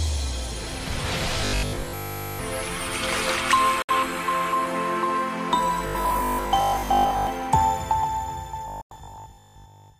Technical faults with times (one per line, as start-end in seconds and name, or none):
1.41-2.39 robotic sound from repeated short buffers
3.82-3.89 digital broadcast dropout
5.87-7.27 robotic sound from repeated short buffers
8.68-9.98 robotic sound from repeated short buffers
8.81-8.91 digital broadcast dropout